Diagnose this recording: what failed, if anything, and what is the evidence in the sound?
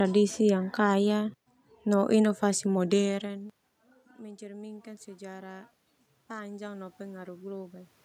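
Drift correction step from 2.77 to 3.87 s, after "yang kaya no inovasi": speech slows 5.4% and drops nearly a semitone, likely buffer clock-matching resampling, then snaps back.

Automatic gain rising from 6.28 to 8.0 s: call-processing gain control answers an input about 20 dB quieter, swelling speech and room noise together by about 4 dB.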